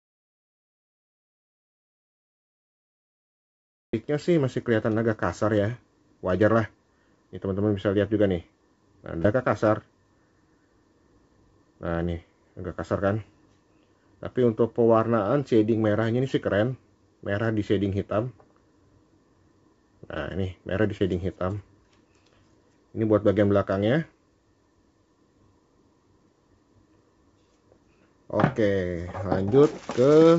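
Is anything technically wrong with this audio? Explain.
Yes. There are two kinds of fault.

The clip opens with an audio dropout to silence. It is already under way when the clip starts and lasts until 3.93 s. For that stretch there is silence, with no room tone at all. Then the sound comes in abruptly, mid-flow. The likely cause is a lost input, such as a dropped link or a stray mute, while silence kept being written. Whatever happened in that time is gone.

There are also two short concealed packet losses, at 9.22 to 9.35 s and at 20.98 to 21.02 s. Each time, about 20 ms of the stream failed to arrive in time. The receiver patched the hole by extending the preceding sound, filling about 25 ms and 23 ms, then blended back. Each sounds like a quick smear or wobble. At 9.22 s a few milliseconds of real audio were also dropped, so a brief detail may be missing.

The sound passes through a call codec with nothing above 8 kHz, which points to G.722 at 64 kbps.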